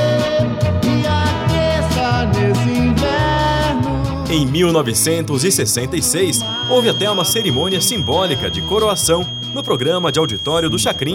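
A feedback whistle runs from 6.2 s to the end: a thin, steady 3.2 kHz tone about 10 dB below the sound, likely from a speaker-to-microphone loop at the edge of feedback.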